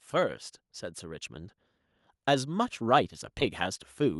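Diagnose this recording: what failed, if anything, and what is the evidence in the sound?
Nothing failed here: none of the stages between the microphone and playback has left any audible trace on the speech.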